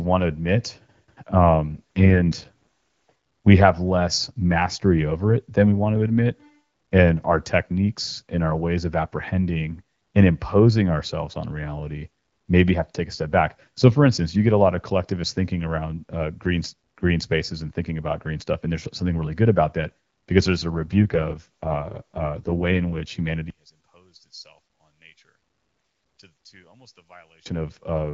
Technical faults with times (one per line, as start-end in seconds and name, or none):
1.68-2.49 AMR rate drop
20.70-23.16 AMR rate drop
23.50-27.46 one channel inverted